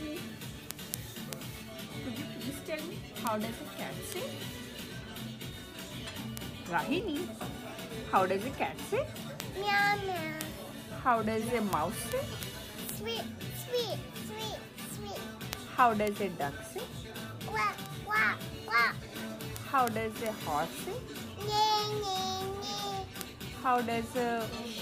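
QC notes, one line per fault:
0.16–24.77 s, word clock ticks: a sharp, uneven tick recurs roughly every 70 ms, about fourteen a second and some three hundred in all, giving the sound a fine, steady crackle. The receiving device is running on its own clock rather than locked to the sender's digital link, drifting apart by roughly 300 parts per million. Each time the two clocks slip past each other, one sample is dropped or repeated and the neighbouring samples are misread, producing the tick.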